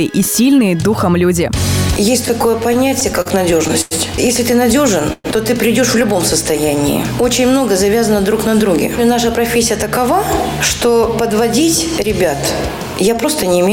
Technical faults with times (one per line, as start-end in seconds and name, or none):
2.25-3.93 repeated stalls (stutter)
5.13-5.26 call audio freeze
6.53-7.52 jitter buffer slow-down
9.40-13.70 jitter buffer speed-up